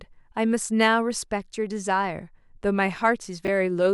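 Speech with a brief garbled jumble from 3.45 to 3.48 s: chunks out of order, with one 10 ms chunk arriving two chunks late, creating three hard joins.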